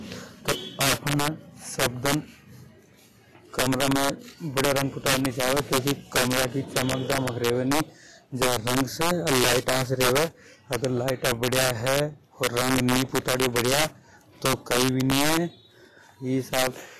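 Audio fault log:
Throughout, integer overflow: loud peaks, driven about 12 dB too hot, wrap to the opposite sign. Roughly 2 percent of samples flip, giving violent cracks.
Throughout, Vorbis compression: the sound is hissy and grainy, with nothing above 14.1 kHz. This is likely low-bitrate Vorbis coding, pointing to about 43 kbps.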